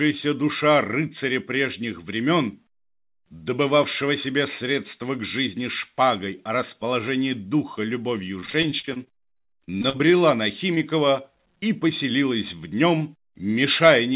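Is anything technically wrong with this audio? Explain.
Yes. The audio has three faults, all typical of a network call. The audio stops sharply at 4 kHz, which fits a narrowband call codec such as G.711.

From 8.4 to 10.0 s there is repeated packet loss, which produces a robotic sound. About twenty gaps occur, the longest about 40 ms. The receiver patched each gap by extending the preceding sound, so roughly 29% of the stretch is synthetic. The result is choppy audio with fragments missing.

From 9.70 to 10.17 s, overlapping the end of that burst, there is a jitter buffer slow-down. The buffer repeated pitch periods to rebuild its reserve, adding 51 ms. Playback runs at about 91% speed with the pitch unchanged, so sounds are audibly stretched.

From 10.74 to 10.78 s there is a short concealed packet loss. A 20 ms piece arrived too late and was synthesized from the preceding signal, then cross-faded back into the real audio. 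It is heard as a brief smear or wobble.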